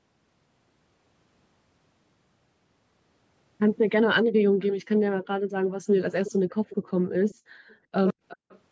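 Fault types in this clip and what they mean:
Echo leak: A faint delayed copy of the speech comes back about 364 ms after the original. It appears in short scraps at 6.25 to 6.32, 6.49 to 6.92, 7.29 to 7.35, 7.68 to 7.75 and 8.28 to 8.59 s. It sits roughly 15 to 35 dB below the direct speech. The likely cause is a loudspeaker on the far side whose echo canceller let part of the returning sound through.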